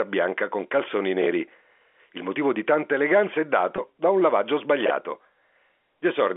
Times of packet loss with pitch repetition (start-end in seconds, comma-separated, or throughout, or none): 3.76-3.78